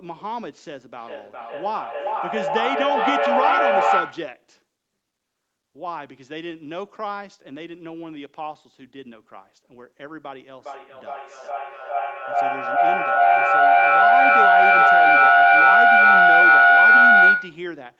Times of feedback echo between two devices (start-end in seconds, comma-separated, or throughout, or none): 0.94-4.38